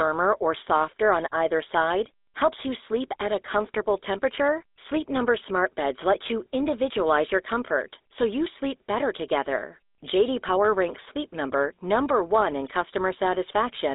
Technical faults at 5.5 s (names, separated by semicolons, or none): GSM full-rate codec